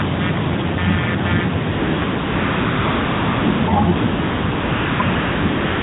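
A buzzing, pulsing noise runs through the whole recording, repeating roughly 150 times a second and sitting not far below the speech. This is computer activity noise, from processor or peripheral load disturbing the audio ground. From 1.72 to 2.02 s, 2.04 to 3.68 s, 3.96 to 5.00 s, and 5.02 s to the end, the real background gives way to smooth, even hiss. This is AMR comfort noise: with no speech frames sent, the receiver synthesised filler noise. The narrowband phone band limit is audible but clean, which fits the 12.2 kbps mode.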